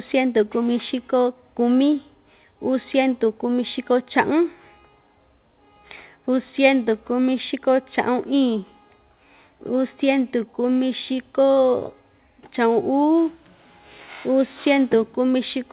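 No technical faults can be heard anywhere in the speech. It has come through a working call path, with nothing above 4 kHz and the narrowband character that fits G.711 mu-law coding.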